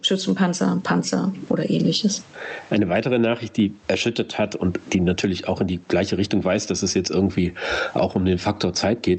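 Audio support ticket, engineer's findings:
Gain pumping throughout the speech. Swing around 20 dB. Likely cause: input gain far too high, fast limiter clamping each peak. Loud and soft passages squashed together.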